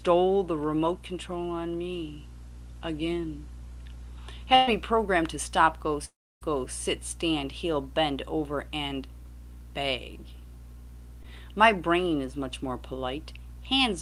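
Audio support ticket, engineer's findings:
Burst of packet loss, 4.55 to 4.69 s: last sound stretched and fading for roughly 120 ms, then jumps ahead. Jitter buffer concealment covering a run of late or lost packets.

6.05 to 6.43 s: concealment fill fades out, then about 0.29 s of silence before audio resumes further on, roughly 360 ms gone. Likely a long network dropout, nothing arriving.

Short concealed packet loss, 11.23 to 11.26 s: quick smear where about 20 ms went missing and the decoder patched it with extended audio. Top end stops near 12 kHz, consistent with Opus on this call path.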